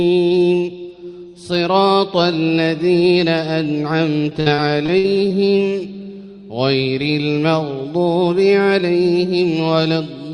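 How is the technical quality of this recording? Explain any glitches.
The recording has one clear glitch: repeated packet loss (robotic sound) from 4.29 to 5.32 s. Six holes of up to 57 ms each are filled by stretching the preceding sound, so about a fifth of that second is synthetic. That gives a choppy texture with pieces missing. Unlike a single dropout, the gaps recur closely and blur into one robotic stretch.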